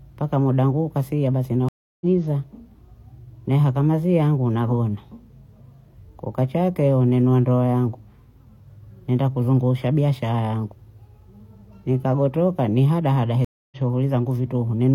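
At 1.69 s, right after "muda wangu ukafika basi", a stream reconnect cuts the speech. The connection dropped and a new decoder picked up mid-stream, leaving about 0.33 s of silence that ends at 2.05 s, with roughly a fifth of a second of audio skipped. At 13.45 s, after "nikagotoka ni hadahada", a second reconnect leaves about 0.27 s of silence until 13.77 s and skips roughly 0.15 s. On a waveform each shows as a flat gap with a faded-in restart. A spectrogram shows a blank vertical band and a discontinuity where the speech resumes.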